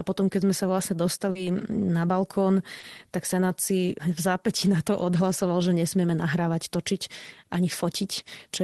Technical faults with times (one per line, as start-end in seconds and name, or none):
1.31-1.38 short concealed packet loss
2.79-2.86 short concealed packet loss